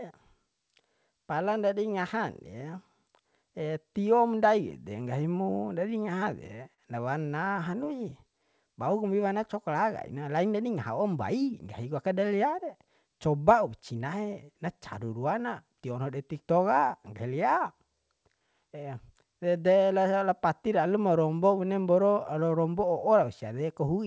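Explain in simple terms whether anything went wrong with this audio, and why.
Repeated stalls (stutter) at 5.90 to 6.80 s and again at 7.30 to 8.13 s: the call's audio arrived late, so playback briefly held the last sound. It drags and stutters but loses nothing, unlike dropouts.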